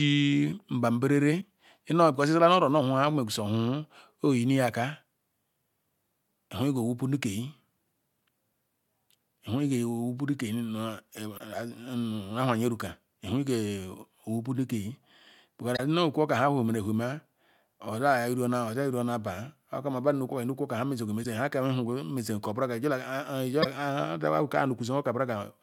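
Five short bursts of damaged data in a compressed stream interrupt the speech, at 1.37–1.43 s, 11.35–11.40 s, 15.74–15.80 s, 21.20–21.26 s and 23.60–23.66 s, each lasting about 50–60 ms. Corrupted bytes make the decoder misread those frames and lose sync until it finds a valid header. The result is a brief chirp, squawk, click or short hole in the speech.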